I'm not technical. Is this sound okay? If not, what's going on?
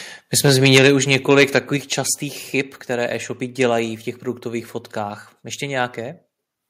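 No. From 0.45 to 1.58 s, just before "častých chyb", the loudest parts of the voice sound harsh and crackly, as if torn at the edges. This is microphone overload: the input was most likely set too high, so the tops of the loudest sounds were chopped off.

At 0.78 s and again at 1.77 s, right before "častých chyb", the voice and the background suddenly get quieter in a single jump. This is the microphone volume being stepped down, most likely the call software lowering the input level after hearing it distort.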